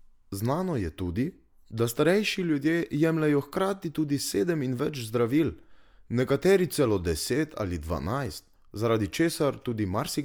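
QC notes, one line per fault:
No faults heard in this speech recording.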